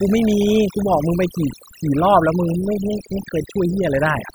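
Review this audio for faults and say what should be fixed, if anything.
Overdone noise removal throughout: the noise reduction was set too strong, switching off frequency bands near its noise estimate, leaving twinkling specks between phrases. Set the reduction strength lower, or clean up the noise at the recording stage so less processing is needed.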